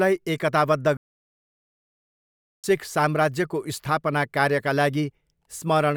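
At about 0.97 s the speech just cuts out and stays dead silent until around 2.64 s, a gap of roughly 1.67 s. That's a playback stall: the sound stops mid-flow and then picks up again. The likely cause is the player starving for data or having its playback thread blocked, so nothing reached the output until it recovered. It's long enough that you'd notice it straight away as a dropout rather than a pause.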